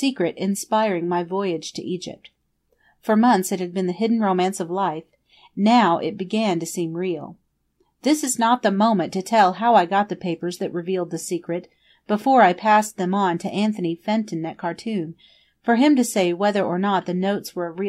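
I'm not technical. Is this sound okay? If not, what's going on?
Yes, the sound is fine: nothing in the recording itself is going wrong, so there's nothing here you need to worry about.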